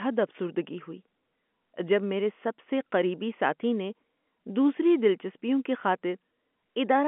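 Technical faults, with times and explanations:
No faults detected; the speech sits in the narrow 200 Hz to 3.4 kHz telephone band expected of G.711 coding, which fits a 64 kbps A-law line.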